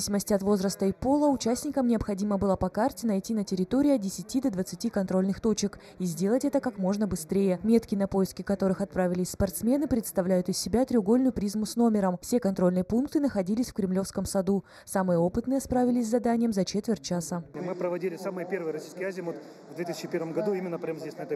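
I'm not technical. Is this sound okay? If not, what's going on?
No. From start to finish the sound is hollow and phasey, as if heard through a tube, with part of the upper range thinned out. This is channel delay (comb filtering). One side of the audio arrives a tiny fraction of a millisecond late, and when both sides are mixed into one, they cancel each other at evenly spaced pitches. The first of those gaps falls around 3 kHz.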